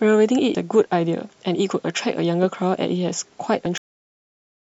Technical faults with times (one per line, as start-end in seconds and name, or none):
0.54 damaged data in a compressed stream
3.65 damaged data in a compressed stream
3.78-4.78 cut-off end